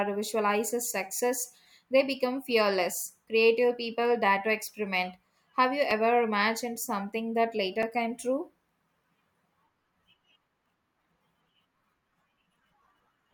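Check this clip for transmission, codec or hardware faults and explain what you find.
Two short blocks of digital silence interrupt the speech. At 5.91 s, just before "imagined something that", about 4 ms of audio drops out. At 7.82 s, between "imagined something that" and "came true", a gap of about 5.3 ms does the same, which fits a 256-sample buffer left unfilled. Each cut and return is abrupt, so the gaps sound like ticks rather than the smoothed dropouts of concealed packet loss.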